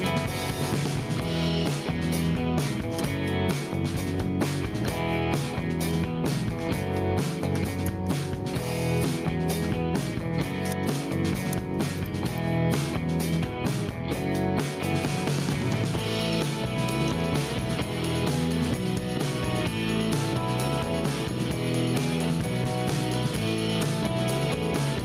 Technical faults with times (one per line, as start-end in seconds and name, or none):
0.00-25.05 gain pumping